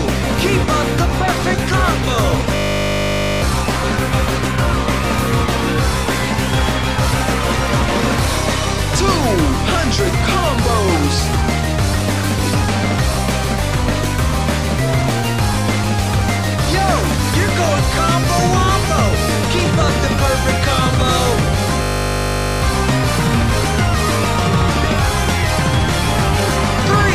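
At 2.56 s the sound locks into a system hang loop until 3.42 s, and again from 21.82 s to 22.62 s. Each time, playback froze while the hardware kept replaying one 20 ms slice of its buffer, giving a steady 50 Hz buzz. Roughly a second of audio is lost the first time, somewhat less the second. The waveform shows an identical 20 ms shape tiled end to end, and the spectrogram shows flat horizontal lines spaced 50 Hz apart.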